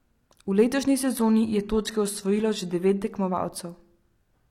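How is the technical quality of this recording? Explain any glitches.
The recording has one quality fault, a temporary drop in the stream's bitrate.

From 1.02 to 3.02 s an adaptive stream plays at a lower bitrate. The player switches to a leaner encoding, which fits a move from roughly 96 kbit/s AAC to about 20 kbit/s HE-AAC. The speech abruptly loses its natural treble, the top end turns synthetic, and codec artefacts rise. There is no gap at either switch.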